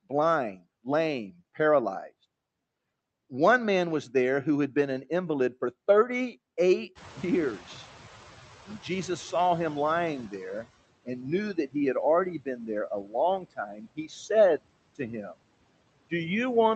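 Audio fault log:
throughout, noise suppressor artifacts. Bands judged to be steady noise are cut by about 20 dB, frame by frame. The background dips between words and swells beneath them.
6.95 to 10.66 s, noise suppressor catching up. Room noise jumps about 20 dB near 7.0 s. The noise estimate lags, so reduction is only about 13 dB until it adapts over 3.7 s.
13.04 to 13.14 s and 13.41 to 14.11 s, speech cut by the noise suppressor. Speech is mistaken for noise and drops by up to about 9 dB, then about 15 dB. It sounds swallowed.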